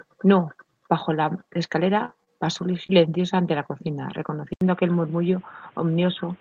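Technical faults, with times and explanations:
1.95 to 3.21 s, scattered short gaps: about three brief dropouts are spread across this stretch, the longest around 30 ms, with roughly 60 ms of sound missing in total. Each hole was patched by stretching the preceding sound, so about 120 ms ends up rebuilt, leaving small ticks and smeared hiccups while the rest stays clear. Unlike a single long dropout, no one gap is long enough to be heard as silence or a break.
4.53 to 6.41 s, input switched to a poorer device: after an 80 ms silence at the switch, the speech carries nothing above 3.8 kHz and turns dull and boxy, with a new noise floor about 30 dB below the signal. The loudness stays about the same. The likely cause is a change to another microphone or a headset call profile. What sets it apart from a simple low-pass filter is the abrupt onset, the silence at the switch, and the newly added background noise.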